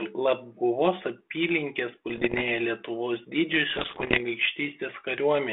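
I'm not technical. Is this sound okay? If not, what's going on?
No. There are two short rough patches, from about 2.09 to 2.43 s and again from 3.70 to 4.19 s, and the second one is worse. You're hearing bit errors on an ADPCM link. This is the kind of phone-style connection a cordless handset uses, and some of the digital bits got scrambled in transit. Each wrong bit throws the decoder off for a moment, so instead of one click you get pops, gritty bursts and brief jumps in loudness.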